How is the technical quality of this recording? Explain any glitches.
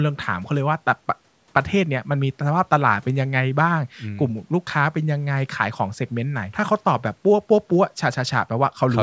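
Nothing stood out on listening to this speech recording, which has gone through a call's microphone processing that leaves nothing above 8 kHz and trims the lowest bass as it normally does.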